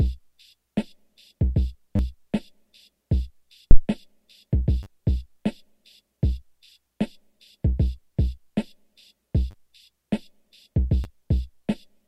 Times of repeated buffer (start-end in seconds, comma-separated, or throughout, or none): 1.96-1.99, 4.83-4.86, 6.70, 9.51-9.54, 11.04